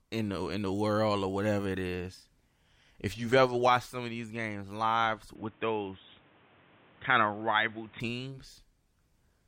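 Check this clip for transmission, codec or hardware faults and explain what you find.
One fault is present. From 5.35 s to 8.00 s, right after "of these games live", the speech abruptly turns dull and boxy, losing everything above 3.8 kHz and gaining a noise floor about 30 dB down, then clears. This is likely an input switched to a poorer device, such as a narrower-band microphone or headset call profile, with no gap and little level change.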